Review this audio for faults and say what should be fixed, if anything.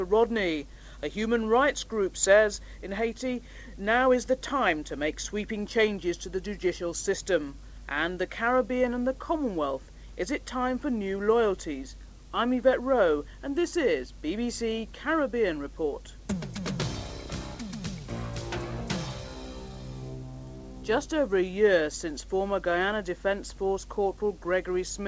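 Nothing here needs fixing: the audio shows the expected character of a wideband call path, with no content above 8 kHz, which fits a G.722 link at 64 kbps, and no faults can be heard in it.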